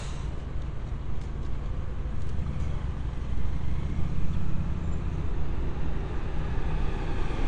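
A recording of everyday sound carries AAC compression damage from start to finish: nothing sits above 9.7 kHz, and the coarsely quantised spectrum is plainly audible as dullness and smearing. This likely comes from AAC-LC encoding at a starved bitrate, around 32 kbps.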